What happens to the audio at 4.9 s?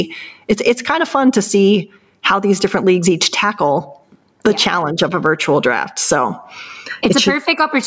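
At 4.9 s the gain pumping that runs through the whole clip is present. The gain is pulled down by about 20 dB under each loud sound. Speech sounds squashed. The likely cause is gain set far too high, with a fast limiter pulling it down.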